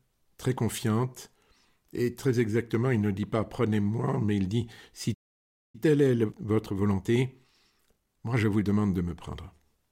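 At 5.14 s the sound stops dead for about 0.6 s, a playback stall, likely the player running short of data, distinct from a brief click-like dropout by its length. From 5.75 to 8.75 s, time-compressed catch-up runs the audio about 1.1 times fast, yet the pitch holds steady, unlike a simple speed-up.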